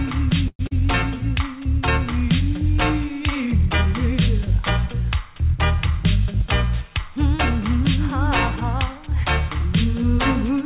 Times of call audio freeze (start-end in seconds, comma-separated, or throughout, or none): 0.48-0.61